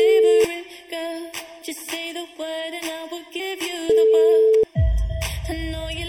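Channel delay (comb filtering) runs through the whole audio: one channel trails the other by a fraction of a millisecond, and when they sum to mono, shared content cancels at a first notch around 1.5 kHz and at evenly spaced points above it, leaving a hollow, phasey tone. MP3-style compression damage is plainly audible throughout as watery, swirling treble, smeared attacks and a dulled top end where weak frequency detail flickers in and out, most likely from MP3 encoding at a low bitrate around 64 kbps. Compressed frames skipped cause forward jumps at 1.61 s, 3.39 s and 4.54 s, dropping about 0.4 s, 0.15 s and 0.3 s of audio respectively, each a multiple of the 26.1 ms frame. Overlap between neighbouring frames turns each join into a brief smeared blip instead of a sharp click.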